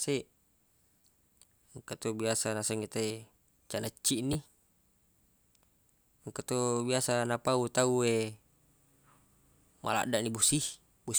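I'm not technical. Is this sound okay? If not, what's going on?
No. Twice, at 1.02 to 1.04 s and again at 4.33 to 4.35 s, fresh audio reached the player late, so it replayed its last tiny chunk. This is a repeated buffer. In the speech, each time comes out as a brief click or buzz rather than a stutter. The chunk size fits a 10 ms buffer played three times in a row, hiding a tiny slice of real sound.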